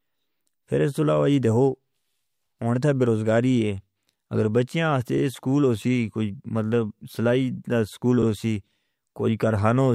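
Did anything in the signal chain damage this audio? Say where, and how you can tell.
Yes. Overlapping chunks at the buffer stage: the audio was handled in 3-second chunks, each beginning 50 ms before the last ended, so that slice plays twice. The stutter falls at 5.17 s, just before "سکول ہو سی", and at 8.22 s, right after "سلائی دا سکول", 3.05 s apart.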